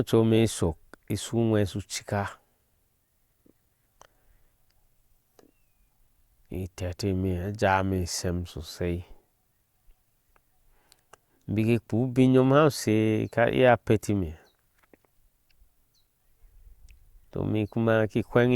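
No technical faults are audible anywhere in this recording.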